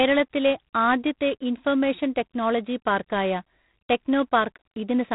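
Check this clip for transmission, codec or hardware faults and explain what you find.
G.726 ADPCM damage runs throughout the speech. With about 3 bits per sample of prediction error, which fits 24 kbit/s, the clip has a harsh, rasping hiss that tracks the speech level and no content above 3.8 kHz.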